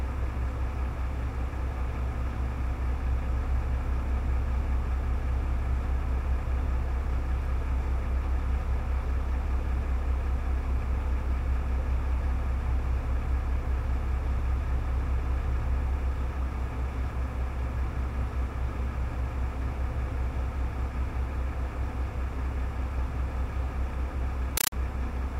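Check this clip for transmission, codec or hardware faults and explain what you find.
One fault appears near the end. From 24.57 to 24.72 s, a compressed stream played as audio: undecoded AC-3 data, which fits a 384 kbps stream, is treated as samples. This produces loud chattering static in 8 ms noise bursts repeating at 31.25 per second, with silent padding between them. That regular burst rhythm distinguishes it from steady broadband noise.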